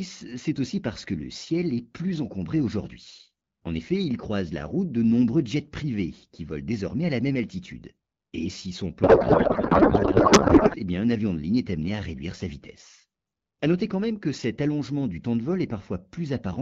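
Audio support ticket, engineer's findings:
Codec payload misread, 9.03 to 10.76 s: speech replaced by garbled warble and noise. AMR-WB framing mismatch, consistent with octet-aligned payload parsed as bandwidth-efficient, shifting fields within each frame.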